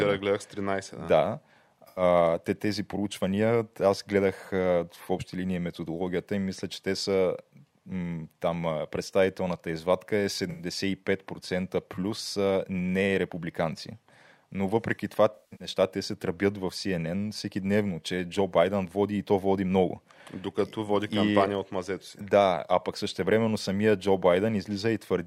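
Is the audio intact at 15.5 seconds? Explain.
No. AAC frame loss with concealment runs from 15.35 to 15.68 s. About 235 ms of data went missing across 256 ms, the longest run roughly 150 ms. The decoder patched each gap from the last good spectrum, leaving a smeared, noisy stretch.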